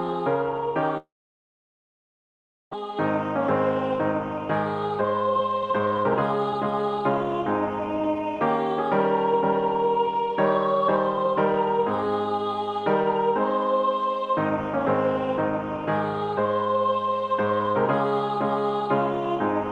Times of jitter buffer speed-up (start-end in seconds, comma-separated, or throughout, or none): 5.01-8.41, 9.33-12.21